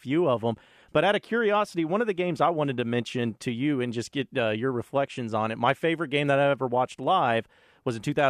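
Listening closely to the speech, nothing stood out as a technical fault at any point.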